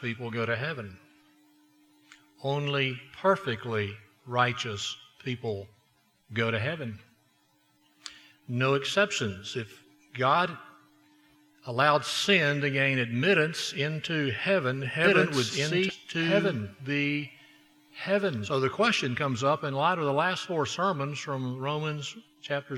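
A doubled audio track runs from 15.04 to 18.50 s: a full-band second copy at about the same level trails roughly two seconds behind, likely from a second, slower capture path. It starts and stops abruptly, with no decay or room colouring, and shows on a spectrogram as the same patterns repeated about two seconds apart. A stream segment skipped at 15.89–15.94 s, with the sound jumping ahead over a small blip, likely because one segment failed to load and playback continued with the next. On the waveform this shows as a sharp discontinuity, and on a spectrogram as a brief vertical broadband line where the content abruptly changes.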